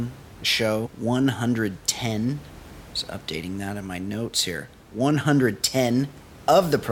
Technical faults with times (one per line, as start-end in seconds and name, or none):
none